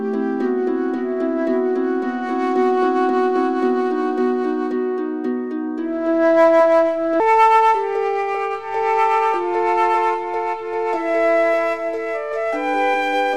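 From 7.20 s to the end, the audio plays back at about 1.35 times its original speed, a section at the wrong speed. Pitch rises by about five semitones in step with the quicker pace, so everything turns higher and hurried at once. The likely cause is playback or editing against a mismatched clock. Unlike a pitch-shift effect, which alters pitch alone, here timing and pitch move together, and the change lands abruptly rather than drifting.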